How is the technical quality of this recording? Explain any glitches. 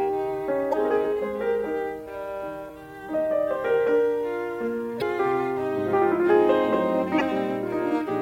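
The music is marred by damaged data in a compressed stream, occurring four times: 0.70 to 0.74 s, 2.65 to 2.69 s, 4.98 to 5.02 s, and 7.17 to 7.22 s. Corrupted bytes make the decoder misread frames and lose sync while hunting the next header, leaving brief chirps or blips of roughly 40 ms each.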